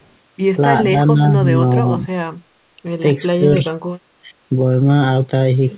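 The speech keeps dipping in short bursts: at 0.9 to 0.96 s, 1.12 to 1.2 s, 1.57 to 1.61 s, 1.83 to 2.08 s, and hardest at 3.36 to 3.45 s, where it drops by roughly 25 dB against about 10 dB elsewhere and only about 5 dB at 1.57 s. That choppy ducking is speech suppressed in double talk, likely the echo canceller mistaking this talker for loudspeaker echo while the far end spoke and turning it down. All of this sits inside the narrow band left by the 4 kHz telephone-style codec.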